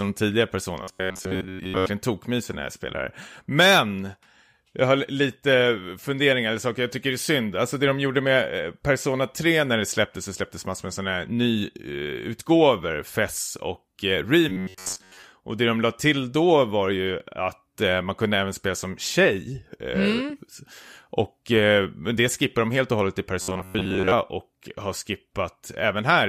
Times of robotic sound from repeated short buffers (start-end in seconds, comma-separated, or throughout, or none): 0.83-1.86, 14.49-15.25, 23.42-24.13